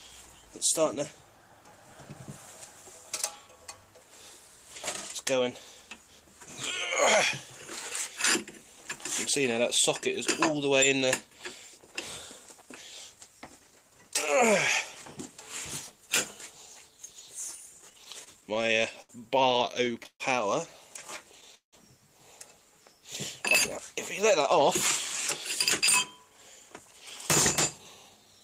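Between 17.81 and 19.11 s, 19.49 and 20.22 s, and 21.08 and 21.75 s the audio shows repeated stalls (stutter). Packets arrived late, the jitter buffer kept running dry, and the receiver stretched the last sound to cover each gap. Gaps grow from 70 ms to 177 ms, so the sound drags and hiccups while nothing is lost.

From 26.23 to 27.01 s and from 27.78 to 28.40 s, jitter buffer speed-up plays the sound at about 110% and 111% speed with unchanged pitch. The receiver cut short pitch-period slices, around a tenth of a second in total and then somewhat less, to drain excess buffered audio, which sounds hurried.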